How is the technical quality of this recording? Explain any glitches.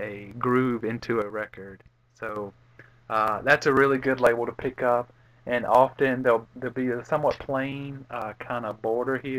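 There's one clear glitch here, a sudden gain jump. At 1.22 s the level drops by about 7 dB in a single step, and at 2.36 s it snaps back up just as abruptly. The background noise falls and rises along with the sound, which tells you the whole signal was scaled at once. That's likely a digital gain setting being switched without any ramp, so the change lands between two adjacent samples instead of fading in.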